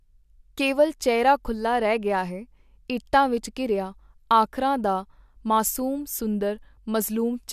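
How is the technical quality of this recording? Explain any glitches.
There is one glitch, near the end. At 7.02 s the speech is interrupted and the sound jumps ahead. A few milliseconds are missing. This is likely a dropped buffer (overrun), where audio was overwritten before being collected and the two sides were joined.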